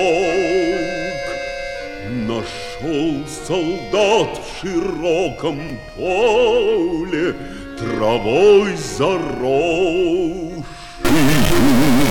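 Chunks out of order at 5.68 to 5.70 s: a brief jumbled flicker. It points to one short block, around 5 ms, arriving or being written late and playing about three blocks after its proper place. Nothing is missing, but the scrambled sequence leaves three hard joins.

Stuck bit from 11.05 s to the end at 12.10 s: the audio turns distorted, and quiet moments fill with hiss. The likely cause is one data bit held fixed at 0 or 1 by a faulty line or converter, pushing roughly half the sample values off by that bit's weight.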